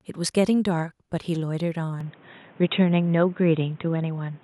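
At 2.01 s the speech abruptly narrows in bandwidth and stays dull and boxy to the end, with no gap at the change. The likely cause is the input switched to a poorer device. What separates this from a simple filter or codec bandwidth drop is that the level also shifts by about 5 dB and a different background noise appears, roughly 30 dB under the speech: a new device's own character arriving all at once.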